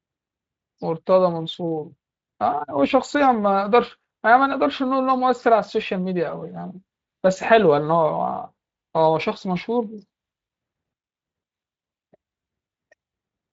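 No faults found in this speech recording; the Speex coding path leaves only light, expected coding texture.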